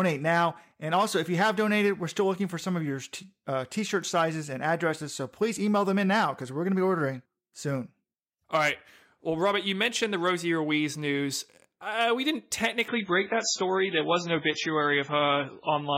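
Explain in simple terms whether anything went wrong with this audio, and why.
Something did slip near the end. Right after "news uh we didn't", at about 12.88 s, the sound suddenly turns duller and a bit watery through to the finish, with nothing above about 7.6 kHz. That's an adaptive stream at a lower bitrate: the connection slowed, so the player swapped to a rougher version without any gap.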